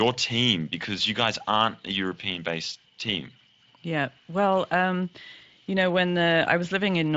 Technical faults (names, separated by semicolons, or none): none